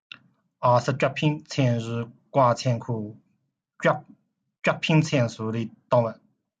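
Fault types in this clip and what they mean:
No technical faults can be heard in this speech recording.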